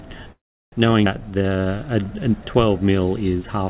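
From 0.32 to 0.75 s there's a call audio freeze: the last sound trails on, fades to silence for about a third of a second, then picks up exactly where it left off. Likely the packets were held up and the jitter buffer ran dry.

Around 1.05 s it skips ahead, with roughly a tenth of a second of audio dropped and the two sides butted together with barely any gap.

Then from 1.31 to 2.21 s there's a jitter buffer slow-down. Repeated pitch periods stretch that stretch by 116 ms, to 88% speed at the same pitch, so sounds drag out a bit. All of this sits on a band that stops at 4 kHz, which fits a G.711 call path.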